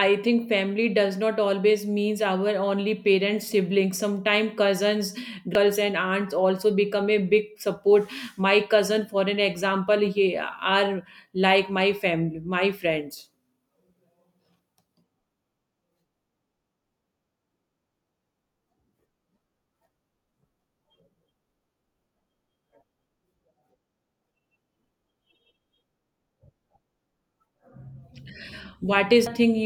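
A short glitch cuts into the speech from 5.55 to 5.58 s, and a much briefer blip follows at 29.26 s, near the end. Both come from damaged data in a compressed stream. At each point some of the encoded bytes were lost or corrupted, so the decoder misread the affected frames, lost sync, and had to search for the next valid frame header. That produced a glitch instead of the intended audio.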